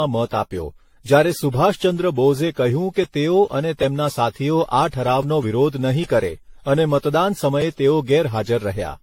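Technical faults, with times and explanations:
Throughout, generation loss: the speech sounds swirly, smeared and hollow, with blurred consonant attacks and nothing above 16.6 kHz, which fits repeated AAC-LC coding at around 64 kbit/s. The likely cause is the audio being decoded and re-encoded roughly seven times. Each pass quantises again on a shifted frame grid, so its noise and spectral gaps stack on top of the earlier ones and degrade the sound well beyond a single encode at that rate.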